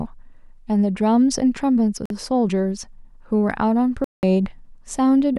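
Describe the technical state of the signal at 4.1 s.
Packets likely reached the headphones too late, causing a Bluetooth dropout from 4.04 to 4.23 s: the speech goes silent, resuming further on as if it had played through.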